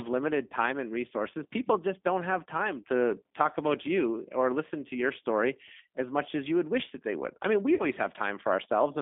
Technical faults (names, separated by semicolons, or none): G.729 codec; VoIP packet loss concealed by the speech codec